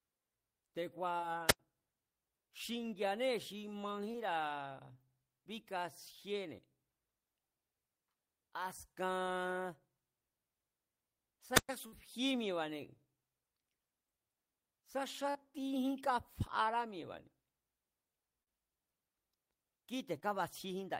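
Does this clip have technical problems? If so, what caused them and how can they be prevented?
Yes, three kinds of fault.

Short concealed packet loss at 1.17–1.32, 1.21–1.24, 4.12–4.16, 15.30–15.37 and 20.20–20.24 s: 20 ms gaps (40 ms at 15.3) patched over by the decoder, heard as brief smears. A steadier network path or a larger jitter buffer would prevent it.

Wireless microphone squelch dropout at 1.47–1.59 and 11.54–11.69 s: the FM signal faded, the receiver muted for about 90 and 113 ms, and hiss came in around each hole. Keeping the transmitter within good range with a clear line of sight would prevent it.

Burst of packet loss at 11.86–11.94 s: about 60 ms went missing, concealed as a fading held sound before the audio jumps ahead. A more stable connection, perhaps with redundancy or FEC, would prevent it.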